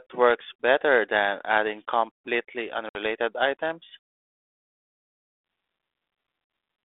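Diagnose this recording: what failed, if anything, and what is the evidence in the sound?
At 2.89 s the speech drops into an abrupt, hard-edged silent gap that lasts until 2.96 s. When it resumes, it comes back briefly roughened before settling within some tens of milliseconds. This is packet loss on an ADPCM call, a network-stage fault. About 60 ms of audio, around seven packets' worth, went missing and was replaced with silence. That left the 32 kbit/s G.726 decoder's adaptive predictor and step size out of step with the sender's until they re-converged.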